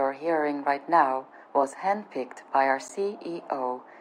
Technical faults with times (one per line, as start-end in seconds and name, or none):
2.88 Bluetooth stall